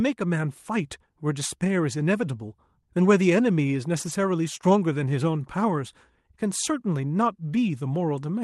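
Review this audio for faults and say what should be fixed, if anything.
From 3.97 to 4.11 s there is a lost packet rebuilt from error correction. About 80 ms of audio comes from lower-bitrate Opus copies carried in the following packets, so the sound turns briefly rougher and noisier rather than dropping out or smearing as plain concealment would. Reducing network loss on the call path, or giving Opus more bitrate for its redundant copies, would prevent it.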